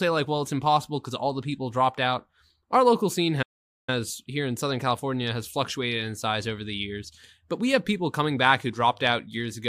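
The player most likely ran out of buffered data, or its thread was held up, producing a playback stall at 3.42 s. The speech cuts off mid-flow into silence for about 0.45 s, then resumes at 3.89 s.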